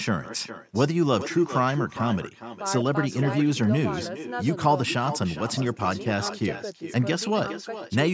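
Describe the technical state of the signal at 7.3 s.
At 7.3 s the speech carries an echo with no canceller, present across the whole clip. The far end's loudspeaker feeds the microphone and nothing subtracts it, so each phrase returns after roughly four-tenths of a second, about 12 dB quieter and thinner. On a waveform every burst trails a smaller copy; a spectrogram shows faint repeated harmonic traces offset in time, all within the call band that stops at 8 kHz.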